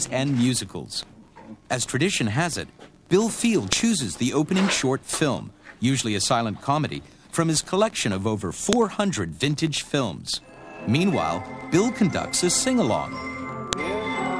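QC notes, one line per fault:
3.73, 8.73, 13.73 s: file header played as audio. Five-second pieces were joined with their headers left in, and those bytes play as samples, giving a sharp click at each join.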